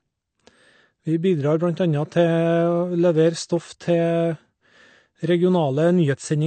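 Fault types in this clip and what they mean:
AAC compression: The speech sounds dull and smeared throughout, with nothing above about 8.5 kHz and a plainly audible warbling, fizzy texture on sibilants and held sounds, likely from low-bitrate AAC-LC coding, around 32 kbps, discarding and coarsely quantising upper frequency bands.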